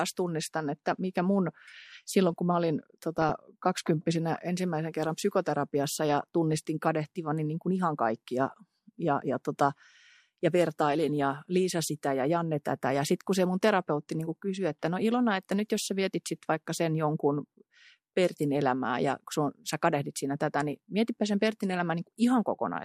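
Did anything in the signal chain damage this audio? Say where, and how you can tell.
Yes. DAB burbling at 3.18–3.38 s and 9.24–9.36 s brings short blips of noise. Reception bit errors slipped past error correction and corrupted the MP2 audio data.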